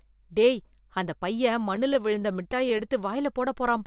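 Repeated stalls (stutter) from 1.76 to 2.91 s, just after "டேய் அந்த பையன்": the jitter buffer ran dry thirteen times, each gap of up to 12 ms bridged by stretching the last sound, so the speech drags and judders without losing anything.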